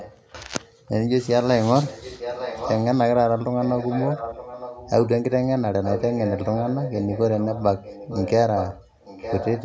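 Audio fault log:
0.00–0.51 s, 1.88–2.84 s, 3.6–5.1 s, 5.83–8.31 s, 8.56–9.65 s: echo leak. An echo canceller at the loudspeaker end likely failed to cancel what its microphone picked up, so a copy of the speech returns 0.91 s late. It is about 20 dB below the speech at first, then about 10 dB below.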